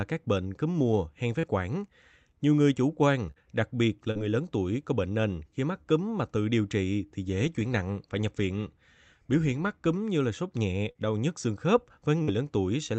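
At 1.39 s the speech carries a short concealed packet loss. About 40 ms of audio never arrived in time, and the decoder bridged the hole with roughly 36 ms of continued sound, extrapolated from what came just before, before blending back into real audio. The result is a brief smear or wobble rather than a silence. The same small patch-up recurs at 4.11 s, at 10.91 s between "như là sốt nhẹ" and "đau nhức xương khớp", and at 12.23 s just after "đau nhức xương khớp".

The event at 3.31 to 3.39 s, between "người chủ quan" and "đặc biệt", is a burst of packet loss. About 48 ms of concealment is held and faded as the gap goes on, so the held sound turns toward a buzz or hiss. A few milliseconds of real audio are skipped when playback resumes. That held decay and the jump forward set it apart from the quick smears, which blend back into the speech. All of this rides on an Opus call path with an 8 kHz band edge.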